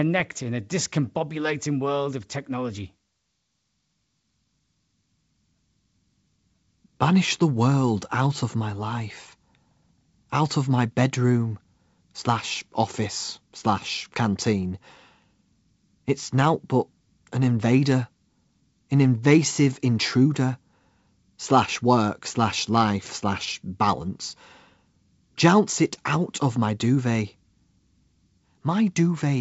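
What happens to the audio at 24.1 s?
Nothing goes wrong at 24.1 s: the speech runs on intact through the call path, whose wideband coding keeps the sound limited to below 8 kHz as it is throughout.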